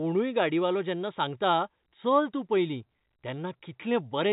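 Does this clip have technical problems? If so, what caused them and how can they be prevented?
No, there are no technical faults in this speech clip. It carries the sound of G.711 telephone coding, with nothing above about 3.8 kHz and only a faint quantisation hiss that follows the level of the speech.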